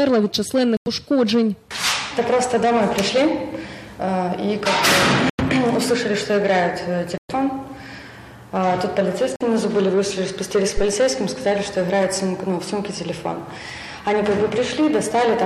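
Corrupt frame muted: damaged compressed frames were rejected by the decoder and replaced with silence, cutting abrupt holes at 0.77–0.88 s, 5.30–5.41 s, 7.18–7.31 s and 9.36–9.42 s. Their 60–135 ms lengths point to runs of frames near 27 ms each, and the timing stays intact.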